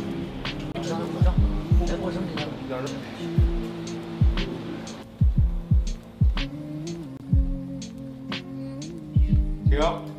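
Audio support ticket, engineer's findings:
Chirp, noise burst or short hole with forward skip at 0.72–0.78 s and at 7.17–7.23 s, each about 56 ms, roughly two 26.1 ms frames. Likely broken MP3 bit reservoir: frames dropped upstream, next frames pull back-referenced bytes from the wrong frame, garbage decoded until the reservoir refills. Differs from plain dropout or loss concealment: audio jumps ahead rather than pausing, with no smoothed or repeated fill, and damage spans whole frames after each cut.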